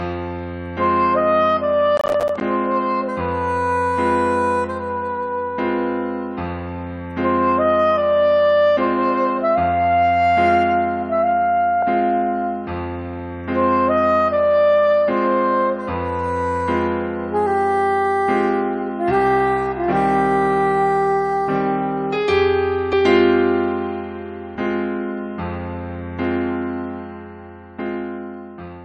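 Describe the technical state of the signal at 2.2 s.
Processor overload crackle runs from 1.97 to 2.41 s. Many roughly ten-millisecond buffers miss their deadline and drop to silence, giving a dense gritty burst rather than one clean dropout.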